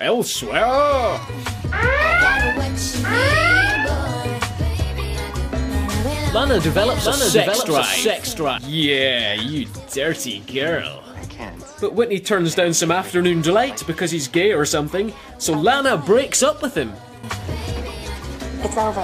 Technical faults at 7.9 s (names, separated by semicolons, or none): doubled audio track